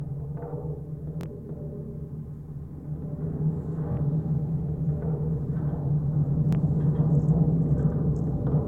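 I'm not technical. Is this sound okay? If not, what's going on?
No. Bluetooth stutter hits at 1.21, 3.92 and 6.53 seconds: a tiny slice repeats instead of silence, as a quick buzz at the first two, then the sound skips ahead.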